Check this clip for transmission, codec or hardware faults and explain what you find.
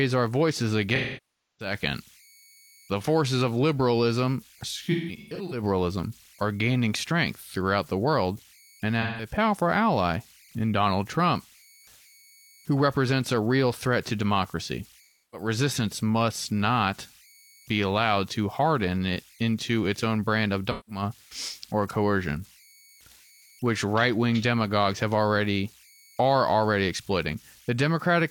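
The speech carries two faults: converter idle tones throughout, and AAC frame loss with concealment at five points.

Converter idle tones run through the whole clip. A faint whistle around 2 kHz, about 31 dB below the speech, is clearest in pauses. An undithered delta-sigma converter settles into repeating bit patterns at low input levels. Unlike mains hum, the tone sits high and shades into graininess under quiet passages.

AAC frame loss with concealment occurs at 0.95–1.74 s (640 ms lost), 4.91–5.62 s after "forces of liberalism", 9.01–9.29 s between "throughout the world and" and "ally in", 15.00–15.48 s, and 20.70–21.02 s after "its own brand of". The 4.91 s event loses 384 ms scattered over about 600 ms, with the longest run near 150 ms. The decoder fills the gaps from the last good spectrum. Shorter losses sound smeared and phasey rather than dropping to silence as a plain dropout would. 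The 640 ms loss fades down and back in.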